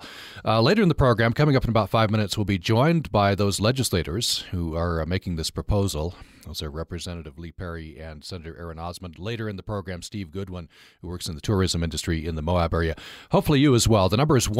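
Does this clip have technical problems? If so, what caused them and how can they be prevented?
Yes. The speech has zipper noise twice. From 6.44 to 7.36 s the level drops by roughly 10 dB. From 11.04 to 11.64 s it rises by roughly 10 dB in 1 dB steps. Each time, the gain moves in coarse jumps, about thirty per second, with no smoothing between them. Every jump leaves a small click. Together they form a fast ticking that rides on the speech while the level moves. Ramping the gain smoothly, sample by sample, prevents this.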